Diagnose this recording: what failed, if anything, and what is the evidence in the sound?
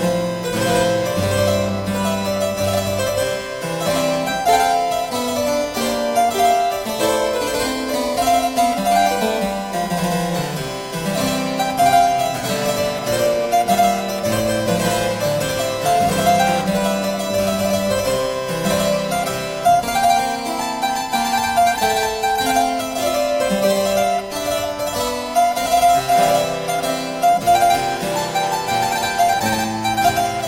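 A USB whine sits under the sound from start to finish, a steady tone at 1 kHz, roughly 20 dB below the signal. The 1 ms USB frame rate leaks through shared power or ground into the analogue wiring. Mains hum would instead sit at 50 or 60 Hz.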